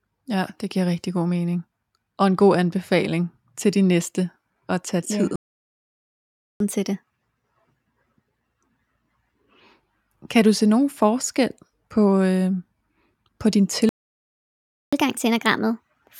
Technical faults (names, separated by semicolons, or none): playback stall; catch-up at higher speed